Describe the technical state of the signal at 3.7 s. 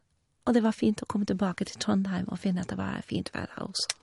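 At 3.7 s the speech still carries the MP3 compression damage present throughout the clip, likely from an encoder starved of bits, consistent with a low rate around 48 kbps. Nothing reaches above 11.2 kHz, and weak frequency components flicker between frames, giving s sounds a swirly, metallic edge.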